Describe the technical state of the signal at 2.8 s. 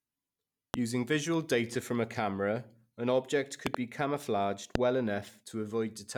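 The speech at 2.8 s plays through intact, with no audible fault at that point.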